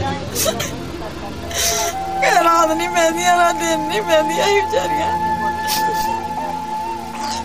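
At 0.59 to 0.62 s and again at 6.36 to 6.39 s the sound skips forward, each glitch about one 26 ms frame long. The likely cause is a broken MP3 bit reservoir: frames were dropped, so the next frame pulled stale bytes from its predecessor.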